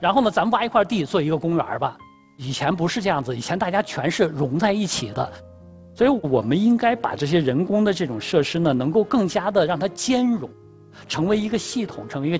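Nothing stood out on listening; the sound carries the ordinary character of a wideband call path, with nothing heard above 8 kHz, which fits a G.722 connection at 64 kbps.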